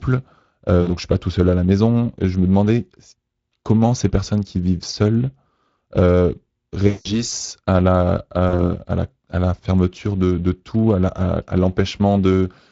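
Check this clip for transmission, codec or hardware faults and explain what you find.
Yes, two faults: Speex coding across the whole clip, and speech-codec concealment of lost VoIP packets in three places.

Speex codec, throughout: the coding damage is plainly audible, and the sound points to a bitrate around 20 kbps. This CELP coder has few bits for the excitation signal, so the speech takes on a noisy, hoarse grain. Unlike the concealment faults, this stays constant rather than coming in bursts.

VoIP packet loss concealed by the speech codec, at 0.81 to 0.89 s, 6.87 to 7.23 s and 8.49 to 8.70 s: about 60 ms, 180 ms and 40 ms of packets went missing. The decoder carried its last pitch and filter forward with falling gain, so the speech smears into a fading tone or coloured noise instead of breaking off into silence. It stays weakened briefly after packets return. The second event is the longest.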